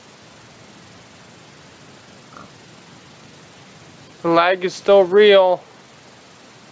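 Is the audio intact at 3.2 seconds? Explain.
Yes, at 3.2 seconds the audio is intact, with no dropout, click, distortion or other fault at that moment.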